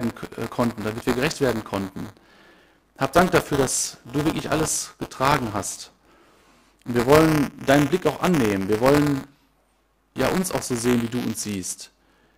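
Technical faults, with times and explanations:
Throughout, buffer tearing. A rough, robotic buzz near 188 Hz rides on the speech and drops away in pauses. The writer and the playback read have crossed. Each 256-sample buffer carries a small slice of audio about 20 ms stale, from one lap of the ring earlier.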